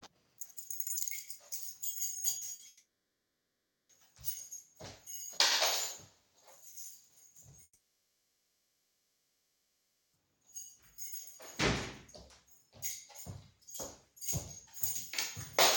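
At 2.37 s, 2.49 s and 2.55 s the sound smears and wobbles three times in quick succession. These are short concealed packet losses of 40 ms, 20 ms and 40 ms: the receiver bridged each missing fragment by extending what it had just played, then rejoined the real audio. Because the gaps are only hundredths of a second and the signal resumes in place, they read as brief blurs rather than breaks.

Right after, from 2.67 s to 3.91 s, the concealment stretches the last sound into a fading tail, and then about 1.06 s of silence follows. When the audio returns, 1.22 s of it is gone rather than delayed. The same happens from 7.63 s to 10.15 s, with 2.5 s lost and about 2.39 s of silence. The cause is likely a long network dropout. Unlike the short losses, the fill gives out and leaves an audible hole.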